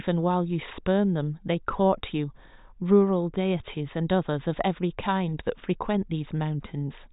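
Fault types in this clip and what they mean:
Nothing here needs pointing out, since the speech comes across without any technical fault to be heard.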